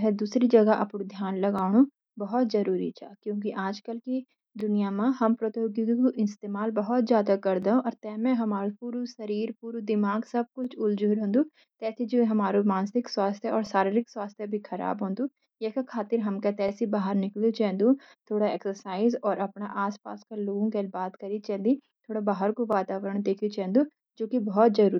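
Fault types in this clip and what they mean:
Overlapping chunks: The speech is carried in 3 s blocks, and each block begins 20 ms before the previous one finished, so that 20 ms slice plays twice at every join. It shows as a brief stutter or tick near 1.59, 4.61, 7.63, 10.65, 13.67, 16.69, 19.71 and 22.73 s. Unlike a dropout, nothing is missing. A tiny piece repeats, and the evenly spaced joins set it apart from random clicks.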